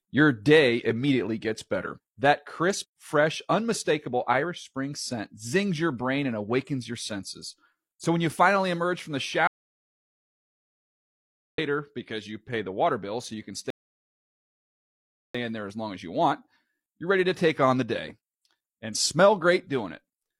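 A speech recording with two separate interruptions. Between 9.47 and 11.58 s the audio input was most likely lost, through a disconnected device, a failed link or an accidental mute, while recording carried on writing silence. This is an audio dropout to silence: after "finally emerge from the" the sound cuts to dead silence with no room tone, and it returns mid-flow at "because you pay the". About 2.1 s of speech is gone for good. Later, from 13.70 to 15.35 s, playback hit a rebuffering stall: the player exhausted its downloaded audio and halted until more data arrived. After "bill so you can" the sound stops for 1.64 s, then resumes exactly where it left off with "in there as long". Nothing is skipped, but that pause is added to the running time.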